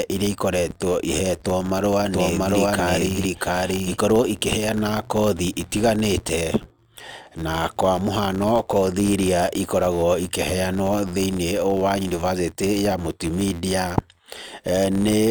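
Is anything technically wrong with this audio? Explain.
Yes, two faults are audible in this speech clip.

Throughout, a steady buzz near 86.1 Hz rides on the speech, louder where the speech is louder. This is a filter restarted on every block: it loses its state at each block boundary, so each block opens with a small transient, which fits a 512-sample block.

From 2.07 to 4.03 s, just after "ihetwo marũa", a doubled audio track appears. A second full-band copy follows roughly 0.7 s behind at about the same level, with no reverb tail, and cuts in and out abruptly. It is likely a second capture through a slower path.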